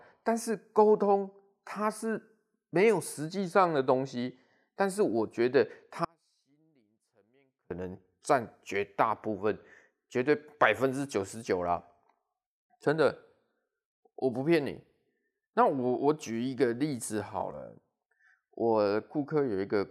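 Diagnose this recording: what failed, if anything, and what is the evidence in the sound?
The speech cuts out abruptly at 6.05 s and returns at 7.71 s, an audio dropout to a faint residue lasting about 1.66 s. The gap isn't silent: a faint leak of the signal continues, roughly 35 dB below normal, so the path after the break stayed live. That points to a likely intermittent analogue connection rather than a buffer underrun or lost packets, which would leave true digital silence. The hard edges rule out a natural pause or fade.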